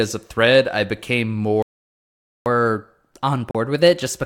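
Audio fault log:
1.62–2.46 s, playback stall: Right after "a thread I became" the speech stops dead and the output sits silent for about 0.84 s, then picks up again. A gap of that length in the middle of a phrase points to the player having likely run dry of buffered data or had its output thread held up, so no samples reached the output until it recovered.
2.46–4.26 s, catch-up at higher speed: Once the speech resumes it runs quick and slightly high for the rest of the clip, about 1.1 times normal speed and roughly a semitone and a half sharp. The rise in speed and pitch together means the player is resampling the audio it fell behind on during the stall. It plays that backlog faster to win back the lost time, so tempo and pitch shift as one.
3.51–3.55 s, Bluetooth dropout: Inside the sped-up stretch there is a brief hole of about 37 ms. When the speech returns, a short slice of it is simply missing, as though it had kept playing through the silence. 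That short gap fits a couple of wireless packets failing to arrive in time and being discarded, likely on a Bluetooth link to the headphones, with output returning once good packets came through.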